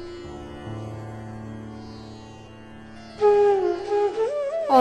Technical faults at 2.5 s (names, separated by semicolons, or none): damaged data in a compressed stream